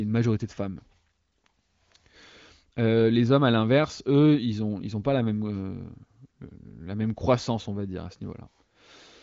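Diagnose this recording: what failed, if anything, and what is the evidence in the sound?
Nothing stood out on listening to this speech, which comes through the AMR wideband (HD Voice) path with its audio band ending near 7.5 kHz, as that codec's design predicts.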